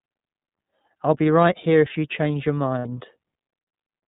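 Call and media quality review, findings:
iLBC codec, entire clip: speech band-limited, nothing above 4 kHz; plainly audible rough, slightly synthetic texture. Narrowband VoIP coding of each frame's excitation independently, consistent with iLBC's 30 ms-frame, 13.33 kbps mode.

Lost iLBC frames, 2.78–2.86 s, right after "if you change your": short held, buzzy vowel-like sound for about 60 ms, consistent with two lost 30 ms frames. The decoder concealed the gap by repeating the last pitch cycle mixed with noise. Clean recovery immediately after, since iLBC frames decode independently.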